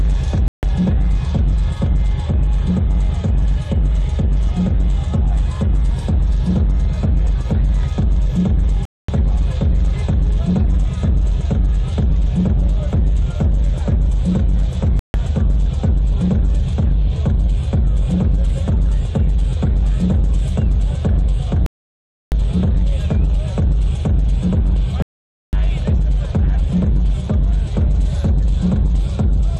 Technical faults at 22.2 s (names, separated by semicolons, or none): Bluetooth stall